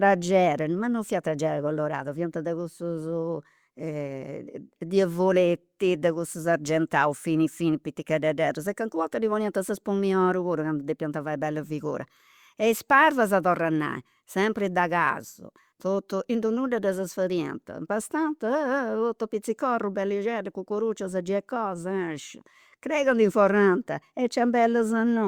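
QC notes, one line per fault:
No faults found in this speech recording.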